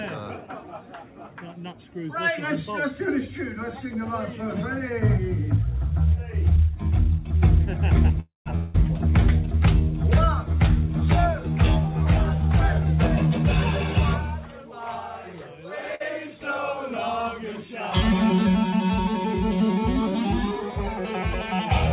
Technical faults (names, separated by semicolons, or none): call audio freeze; long network dropout; jitter buffer speed-up; short stall from a late packet